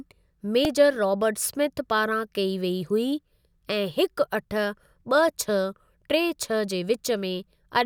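A brief click, closer to a tiny buzz than a stutter, sits at 0.65 s, just before "रॉबर्ट स्मिथ पारां कई". It is a repeated buffer fault. New audio arrived late, so the device replayed its last block several times in a row, with a hard join at each repeat. Each piece lasts only about 1.3 ms, which fits a 64-sample buffer. With so short a piece the repeats fuse into a click, and almost no speech is lost.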